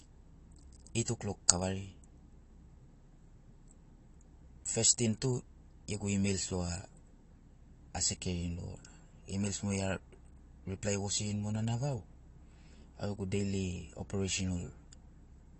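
AAC compression runs through the whole speech clip, from start to finish. Nothing is heard above about 8.6 kHz, so the upper band is simply missing, and codec damage is plainly audible as a dull, smeared quality with a warbling, fizzy edge on sibilants and held sounds. The likely cause is low-bitrate AAC-LC coding, consistent with roughly 32 kbps, where the encoder lowers its cut-off and quantises each frame's spectrum coarsely, leaving gaps that blur detail.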